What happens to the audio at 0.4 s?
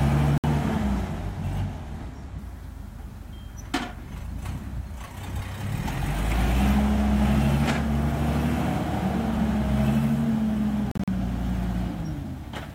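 Audio packets likely reached the headphones too late, a Bluetooth dropout: from 0.38 to 0.44 s there are 61 ms of silence before the sound resumes further along.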